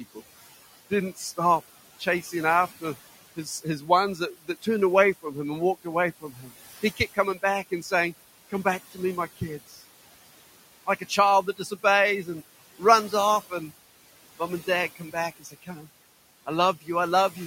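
The noise suppressor is at work from start to finish, and you can hear its artifacts the whole way. The room noise, sitting about 18 dB under the speech, gets pulled down by about 16 dB in the gaps and then comes back up under each phrase, so the background pumps along with the talking. This happens because the suppressor is deciding band by band and frame by frame what counts as noise.

It also misjudges the speech itself. In six stretches, 2.0 to 2.82 s, 3.36 to 4.67 s, 5.23 to 7.92 s, 8.5 to 9.78 s, 10.86 to 13.52 s and 14.39 to 15.86 s, the speech cut by the noise suppressor shows up as quieter bits being treated like background and turned down with it. The drops run from about 10 dB in the first stretch to about 15 dB at worst, on short pieces adding up to somewhere between 0.15 and half a second per stretch, so endings and soft sounds come out swallowed and faint.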